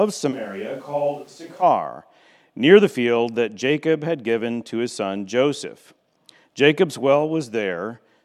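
From 0.34 to 1.61 s, the close microphone's signal likely dropped out, leaving a switch to a distant microphone. The speech abruptly turns roomy and hollow, thinner in the bass and about 5 dB quieter, with background noise sitting around 30 dB below the speech, before snapping back.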